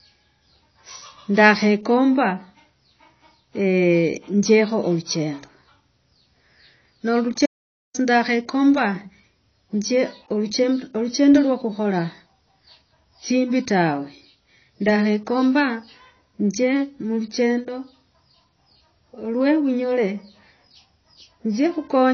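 The speech was most likely squeezed through a low-bitrate encoder earlier in its life and then saved again as a high-bitrate MP3, so this is low-bitrate audio saved at a high bitrate. The generous final encode cannot recover what the first pass discarded. Nothing is present above about 6.6 kHz for the whole clip, leaving sibilants dull and the top end boxed in, with the earlier encoder's thin, smeared character carried through unchanged.

From 7.46 s to 7.94 s the input to the recorder dropped out while it kept writing silence, likely from a lost connection or momentary mute. This audio dropout to silence removes about 0.48 s of sound. The speech cuts off abruptly mid-flow, the gap holds no room tone at all, and the audio resumes just as suddenly at 7.94 s. Whatever was said in that half-second is gone.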